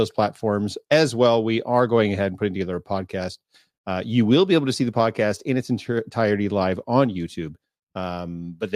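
Nothing goes wrong technically anywhere in this stretch of speech, so there's no fault to pin to any moment.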